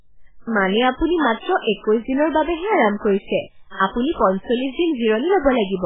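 Throughout the speech, the damage points to MP3 compression starved of bits, likely at a bitrate near 8 kbps. The encoder discards everything above 3.8 kHz and drops weak frequency lines frame by frame, leaving dull, heavily watery, swirling sound with smeared onsets.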